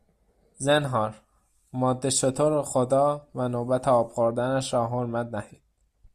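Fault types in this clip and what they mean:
No faults detected in this speech recording.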